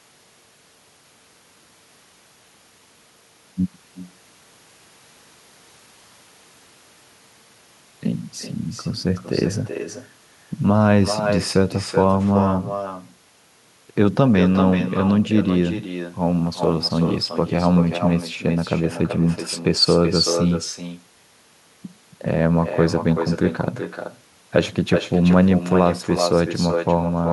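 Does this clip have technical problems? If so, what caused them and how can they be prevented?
Yes. Throughout the speech, echo with no canceller is audible: each phrase returns roughly 0.4 s later, about 9 dB quieter and thinner, because the far end's loudspeaker feeds its microphone unchecked. Enabling acoustic echo cancellation at the far end, or having that listener use a headset, prevents it.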